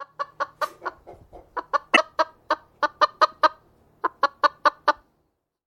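At 1.92 to 1.97 s, damaged data in a compressed stream produces a brief 45 ms glitch. Corrupted bytes made the decoder misread frames and hunt for the next valid header.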